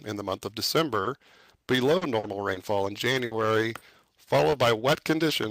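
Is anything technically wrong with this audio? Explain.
Yes, the audio has three kinds of network-related fault.

From 0.93 to 3.97 s there is repeated packet loss (robotic sound). Seven gaps, the longest 60 ms, were filled with about 260 ms of concealment, roughly 9% of that stretch. Each gap was patched by extending the preceding sound, which gives a choppy texture with pieces missing. On a spectrogram this shows as smeared, overly regular harmonic blocks. The waveform has repetitive, slightly flattened segments.

At 4.39, 4.53, 5.19 and 5.29 s, a lost packet was rebuilt from error correction. Each 20 ms frame came from a low-bitrate backup copy carried in the following packet, so there is no gap. These frames sound briefly grainier. A spectrogram shows short vertical strips that are noisier.

From 4.51 to 4.55 s there is a short concealed packet loss. A 20 ms hole was filled by continuing the previous sound and then blending back into the real audio. 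It is heard as a tiny smear or wobble. The spectrogram shows a brief blurred patch.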